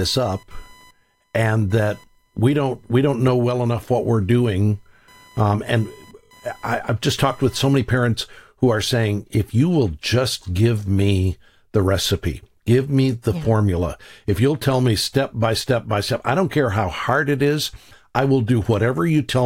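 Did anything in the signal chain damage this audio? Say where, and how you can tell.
Yes. Computer activity noise runs from the start to 7.93 s: a buzzing, chirping layer pulsing at around 1 kHz, sitting roughly 35 dB below the speech and rising and falling on its own schedule rather than with the talker. The damage is in the analogue wiring. Load swings from the processor, graphics card or mouse shift the ground shared with the audio input, and that ground movement is picked up as signal before conversion.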